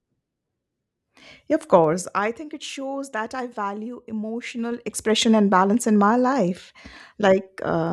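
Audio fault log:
1.80–2.36 s and 4.40–5.22 s, zipper noise: the level drops by about 15 dB just before "it shows that I", then climbs back by a similar amount between "shows that I value" and "and balance in my". Each move is made in unsmoothed 2 dB jumps, about ten a second going down and about seven going up, and every jump leaves a small click, so a ticking rides on the speech. A waveform shows a stair-stepped envelope, and a spectrogram shows faint broadband vertical lines at each step.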